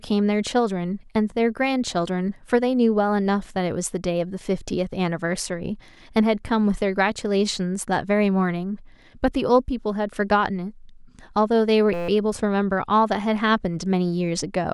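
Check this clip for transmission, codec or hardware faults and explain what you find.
One hardware fault is present: a system hang loop from 11.94 to 12.09 s. The speech gives way to a steady buzz pitched at about 172 Hz. A frozen driver left the sound hardware replaying one 5.8 ms slice, which fits a 256-sample buffer, 26 times over, with essentially nothing lost.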